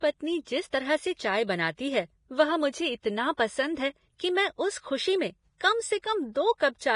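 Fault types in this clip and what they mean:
Vorbis compression: The speech runs the whole way with a hissy, grainy layer. Nothing comes through above about 10.6 kHz, so the top end sounds dull and closed off. The treble that remains is rough, as if fine detail has turned to noise. Consonant attacks sound blurred. Voiced tones have a coarse edge. The damage is heavy and fits a bitrate near 30 kbps. The likely cause is low-quality Vorbis encoding, which keeps only a rough spectral outline at this rate.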